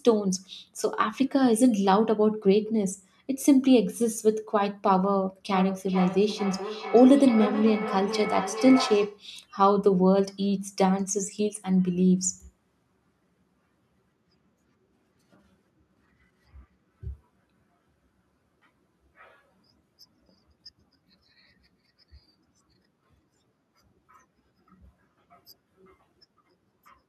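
From 5.51 to 9.27 s there's feedback echo between two devices: the speech loops back roughly every 0.4 s, thinner and ringier, peaking about 10 dB below.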